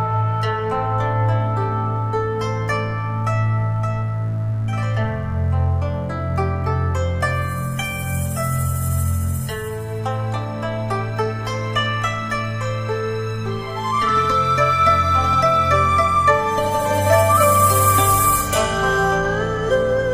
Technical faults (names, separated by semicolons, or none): mains buzz